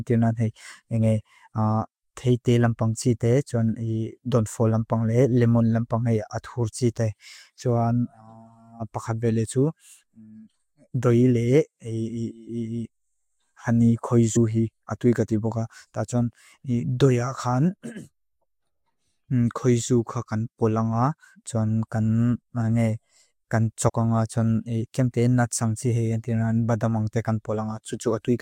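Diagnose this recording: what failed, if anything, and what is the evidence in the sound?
Three brief jumps interrupt the speech: one at 10.94 s, one at 14.35 s, and one from 23.88 to 23.90 s. At each, the speech jumps ahead, losing roughly 40 ms at the first and third and around 70 ms at the second. This is compressed frames skipped at the codec stage: a couple of whole frames each time, about three at 14.35 s, were never decoded, so the audio skips ahead by their length.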